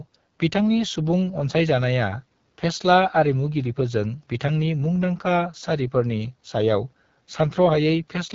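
AMR wideband (HD Voice) codec damage runs throughout this speech clip: a rough, raspy texture that fits the 8.85 kbit/s mode, too few bits for the speech model.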